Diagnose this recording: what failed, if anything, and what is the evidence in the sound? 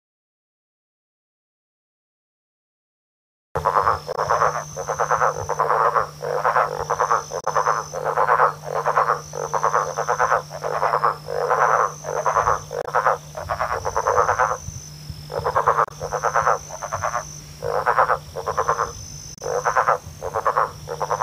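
Five brief disruptions, each about 55 to 70 ms, at 4.13–4.18, 7.41–7.48, 12.82–12.88, 15.85–15.91 and 19.35–19.41 s. This is damaged data in a compressed stream, a codec-stage fault: corrupted frames are misread or rejected, and the decoder loses sync while searching for the next frame header.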